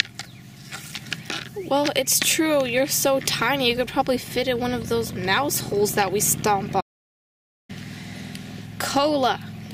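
An audio dropout to silence runs from 6.81 to 7.69 s, removing about 0.88 s of the sound. The audio cuts out mid-flow into silence with no room tone, then resumes abruptly, likely because the input was lost while the recorder kept writing silence.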